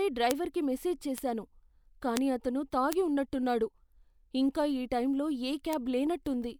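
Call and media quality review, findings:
Bit error spikes: five isolated sharp ticks at 0.31, 1.18, 2.17, 2.93 and 5.73 s, the last just after "ఇంకా ఈ టైంలో ఏ". Peaks reach about -7 dBFS at 0.31, 2.17 and 2.93 s, and about -13 dBFS at 1.18 and 5.73 s. Each is broadband and unrelated to the speech. Single-bit corruption in memory or a digital link is the probable cause: a sample or a few jump by a power of two, then recover.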